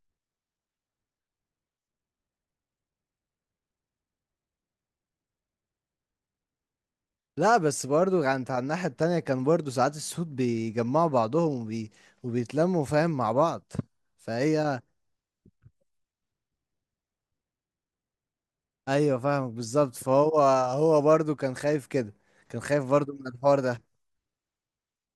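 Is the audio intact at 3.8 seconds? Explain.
Yes, at 3.8 seconds the speech plays through cleanly, with no dropout, click, distortion or other fault at that point.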